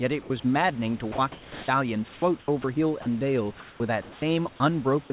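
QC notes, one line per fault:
0.22–0.30 s, sound dropped by the voice detector: 70 ms of sound gives way to an 80 ms steady patch of comfort noise, likely from the sender mistaking sound for background. It is a single clean gap with no flicker.
1.12–1.68 s, sound chopped by the voice detector: the detector likely toggled on and off several times, replacing about 420 ms with synthetic noise. Unlike a single drop, the sound has two or more holes.
2.14–2.64 s, sound chopped by the voice detector: repeated switching, likely from the detector, swaps about 180 ms of this stretch for comfort noise. The speech sounds choppy, not cleanly gapped.
3.02–3.06 s, sound dropped by the voice detector: a brief 40 ms hole filled with steady noise, likely sound judged as background. It is one short, even gap.
3.60–4.22 s, sound chopped by the voice detector: about 400 ms is replaced across several on-off switches, likely by the detector. 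The room noise sits about 27 dB below the speech, all within the narrowband 4 kHz call path.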